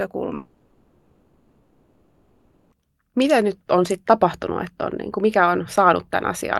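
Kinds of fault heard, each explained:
Long network dropout: from 0.35 to 2.73 s the speech gives way to a smeared, fading buzz that carries on the last sound for the whole gap, with no silence. About 2.4 s of speech is lost, likely because packets stopped arriving and the receiver filled the gap.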